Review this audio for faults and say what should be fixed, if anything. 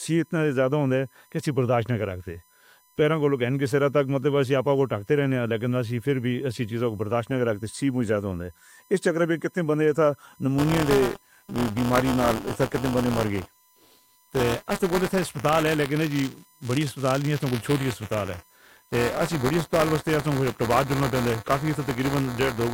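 USB whine, throughout: a fixed 1 kHz tone, strongest near 16 kHz, about 35 dB below the speech, from bus current leaking through power or ground. Prevent it with a powered hub, a ground-loop isolator or better supply filtering.

Buffer tearing, 10.58 s to the end: a 200 Hz rattle where writer and reader overlap, splicing in a small slice of audio about 20 ms old. Prevent it by fixing the pointer synchronisation so writes stay safely ahead of reads.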